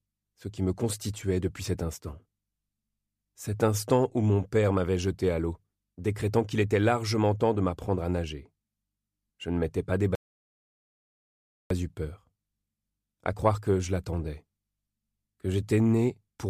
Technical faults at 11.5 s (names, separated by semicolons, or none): audio dropout to silence